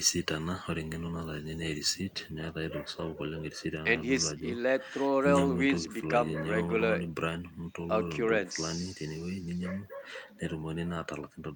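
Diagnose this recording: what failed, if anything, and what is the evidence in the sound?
Listening closely to this speech recording, nothing stood out as a failure at any stage of the chain.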